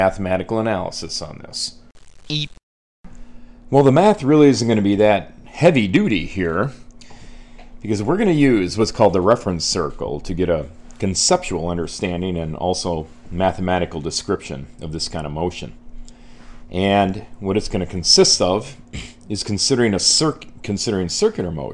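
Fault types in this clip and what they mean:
No faults detected in this audio; nothing to list.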